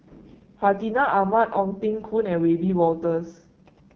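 The AMR wideband (HD Voice) codec runs throughout at a rate that fits its lowest 6.6 kbit/s mode. This leaves the speech rough and raspy, with nothing above 6.9 kHz.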